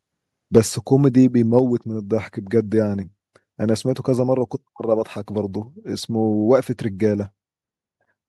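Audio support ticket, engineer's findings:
Microphone overload, 0.56–0.59 s and 1.57–1.59 s. Harsh crackle on peaks, about 5 dB over, then right at the converter's limit. Input gain too high, likely flattening converter tops.

Microphone volume stepped down, 0.58 s and 1.59 s. Sudden level drop, about 4 dB then 3 dB. Likely call software cutting input gain after each clipped peak.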